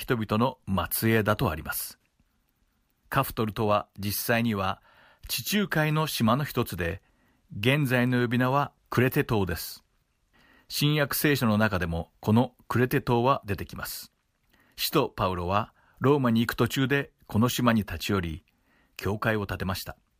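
No technical faults can be heard anywhere here.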